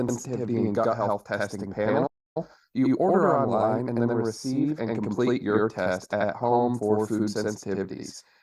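Speech, with a channel delay (doubling) present from start to finish: one channel arrives about 85 ms behind the other, and when the two are summed to mono the late copy sits at equal level as a distinct slap echo trailing every syllable, rather than blending as a short comb-filter colour. A lag of that size fits a 4096-sample buffer inserted in one channel's path, so the offset is a whole block of audio. A playback stall interrupts the speech from 2.06 s to 2.37 s, cutting it off mid-flow for roughly 290 ms of silence before it resumes. This points to the player likely running out of data or having its audio thread blocked until the buffer refilled.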